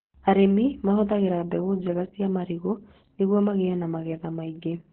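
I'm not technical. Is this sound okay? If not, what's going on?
No. Opus voice compression affects the whole clip, from start to finish. To save space, the speech was squeezed through a voice coder that rebuilds it from a rough model of the voice, and this setting clearly had very little room to work with. Everything above about 4.2 kHz is gone, so the voice sounds muffled, like an old phone call, and the crude rebuilding adds a hoarse, slightly robotic edge throughout.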